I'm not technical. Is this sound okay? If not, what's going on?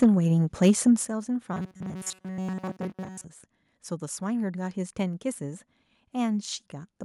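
No. At 0.02 to 0.05 s and again at 0.62 to 0.71 s, the voice has a harsh, crackly edge on its loudest moments. This is microphone overload: the microphone was likely set too sensitive, so the tops of the loudest sounds got chopped off.

At 0.04 s and again at 1.05 s, the voice and background suddenly get quieter in a single step, the second drop bigger than the first. This is the microphone volume being stepped down: the call software likely noticed the distortion and turned the microphone down automatically.

From 1.54 to 3.25 s, the speech turns into a stiff, metallic buzz with a fixed low pitch, though you can still follow its rough shape. This is robotic sound from repeated short buffers: when fresh audio arrived too slowly, the software likely kept replaying tiny scraps of sound instead. That filled most of this stretch and skipped the real audio.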